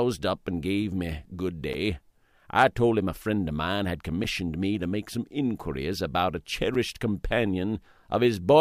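At 1.73 s, 4.24 s and 6.75 s the audio drops out briefly, each time for about 7 ms. These are gaps between chunks: the signal was delivered in blocks about 2.5 s long, and a short stretch of silence sits at each join. Nothing is missing from the audio itself, but it is interrupted at each boundary, heard as a brief hole that recurs at a steady 2.5 s spacing.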